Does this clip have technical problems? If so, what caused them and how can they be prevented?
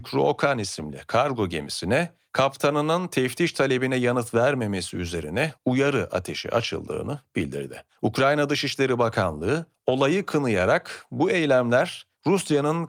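No, the speech signal holds steady throughout, with no audible technical faults to trace or prevent.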